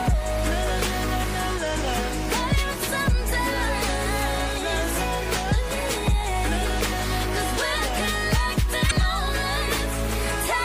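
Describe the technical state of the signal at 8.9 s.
At 8.87 to 8.92 s the compressed stream carries damaged data: a short run of bytes is corrupt, so the decoder misreads the frames there, loses sync and hunts for the next valid header. That comes through as a brief chirp or blip in the audio, about 44 ms long.

Around that moment the whole signal shows plainly audible damage, likely from MP3 compression at a low bitrate, around 64 kbps. The encoder lets weak frequency lines switch on and off between frames, leaving a watery, swirly texture with smeared attacks.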